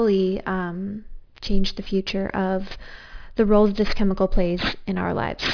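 Aliasing runs throughout the speech: energy above 5.5 kHz folds back as gritty, metallic tones, which fits unfiltered resampling to 11 kHz, unlike a plain low-pass's dullness.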